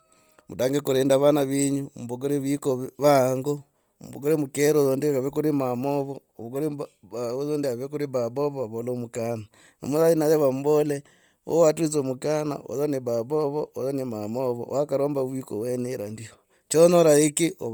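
Across the whole recording, the speech has a breathy, grainy edge, and its upper frequencies sound hissy and smeared rather than crisp, with the band still reaching about 20.2 kHz. This is heavy Bluetooth LC3 compression, likely from an LE Audio link. At a low bitrate, which fits roughly 32 kbps here, the codec discards much of the upper spectrum in each 10 ms frame and fills the gaps with noise, giving that rough, sandy texture.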